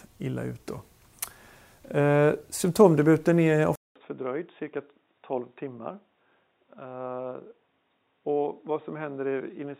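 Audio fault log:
3.76 to 9.8 s, input switched to a poorer device: A 200 ms silence comes first. The sound then turns dull and boxy, with nothing above 3.8 kHz, drops about 10 dB in level, and gains a faint new noise floor. A change of microphone mid-recording is the likely cause.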